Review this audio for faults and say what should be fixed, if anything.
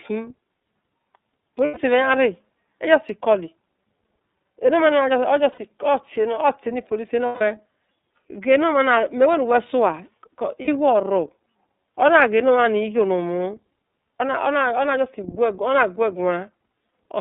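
The whole clip carries iLBC codec damage, and it is plainly audible. The band runs only from 200 Hz to 3.7 kHz. Each frame's excitation is coded on its own, so the speech sounds rough and slightly synthetic. The sound fits 30 ms frames at 13.33 kbps. Using a wideband codec would prevent this.

There are lost iLBC frames at 1.65–1.77 s (120 ms), 5.52–5.58 s (60 ms), 7.26–7.41 s (150 ms) and 10.62–10.68 s (60 ms). The decoder repeats the last pitch cycle mixed with noise. Each gap becomes a held, buzzy vowel that fades over the longer losses. Speech recovers at once afterwards. A steadier network path or redundant packets would prevent it.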